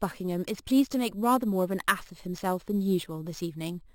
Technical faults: imaging from sample-and-hold upsampling

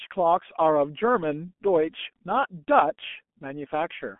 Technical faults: G.723.1 codec

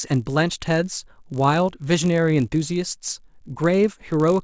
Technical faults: resampler restarted on every block

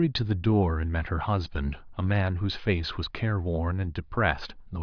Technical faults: none

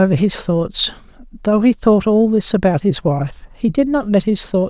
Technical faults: none

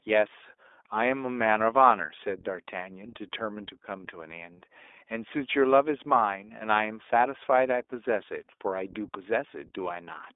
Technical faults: iLBC codec

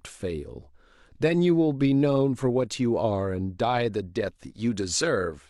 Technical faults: none

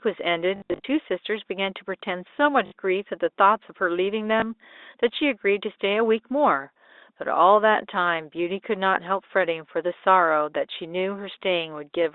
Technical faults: packet loss with last packet repeated

